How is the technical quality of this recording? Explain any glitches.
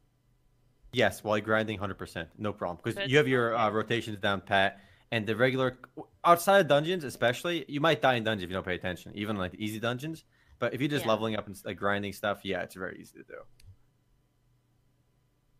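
No glitches or technical faults can be heard anywhere in the recording.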